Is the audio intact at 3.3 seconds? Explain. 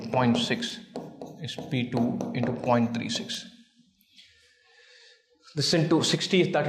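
No. At 3.35 s a bit error spike occurs: one bit in a single sample was flipped somewhere in memory or on a digital link, so that sample's value leapt by a power of two and the next sample returned to normal. That lone outlier, reaching about -13 dBFS, has nothing to do with the surrounding audio. Because it lasts only one sample, its energy is spread across the whole spectrum, and it is heard as a single sharp tick.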